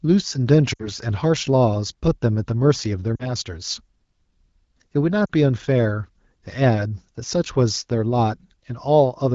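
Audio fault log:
0.73–0.88 s, 3.15–3.29 s, 5.27–5.31 s: lost AMR speech frames. The speech briefly smears and dips as the wideband decoder repeats its last good pitch and vocal tract settings with falling gain. The gaps fit three, then two, then two 20 ms frames. A spectrogram shows frozen, fading harmonics, and the waveform shows an envelope dip.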